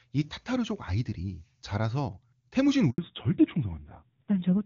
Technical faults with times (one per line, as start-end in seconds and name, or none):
2.90-2.98 handover gap
2.98-4.65 fallback to narrowband